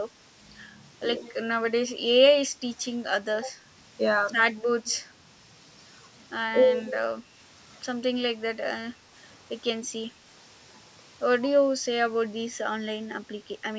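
From 1.21 to 1.33 s and again from 4.84 to 4.93 s, a faint delayed copy of the speech trails about 118 ms behind, roughly 25 and 30 dB down. This echo leak is likely from a far-end canceller letting loudspeaker pickup through. At 7.15 to 7.21 s the speech dips by roughly 15 dB, with speech suppressed in double talk, likely as the canceller turns down both overlapping talkers.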